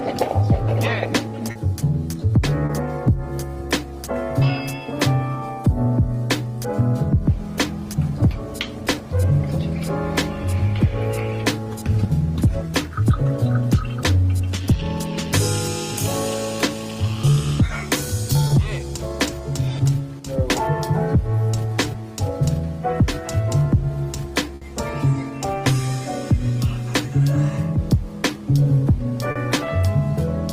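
Short concealed packet loss strikes at 1.51 to 1.57 s and 2.65 to 2.71 s, each time hiding 40 ms that never arrived, and again at 18.47 to 18.51 s for 20 ms. The receiver extends the preceding sound and blends back, so each gap is a brief smear or wobble rather than silence.

From 20.19 to 20.26 s the level drops abruptly by about 6 dB, then returns. This is likely one channel dropping out. Unlike concealment, nothing is smeared or resynthesised. The sound is simply quieter.

At 24.55 to 24.63 s a burst of packet loss leaves 60 ms missing. It is longer than the shorter losses, so the held sound is drawn out and fades before the audio resumes further on with that stretch gone.

A final short concealed loss of 40 ms at 29.31 to 29.37 s brings back the brief smear heard earlier.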